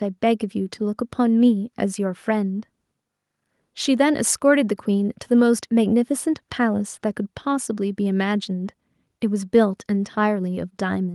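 A speech recording with no technical fault to report. There is nothing here that calls for a time or a cause.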